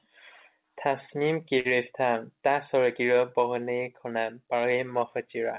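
From 1.6 to 1.74 s the speech briefly hangs: a sound is held too long, with a faint buzz or dip, and then carries on exactly where it left off, with nothing skipped. This is a short stall from a late packet. The jitter buffer ran dry, so the receiver stretched the last sound, filling about 48 ms until the packet arrived. Throughout, the band-limited call sound, with nothing above 4 kHz, fits a G.711 mu-law path.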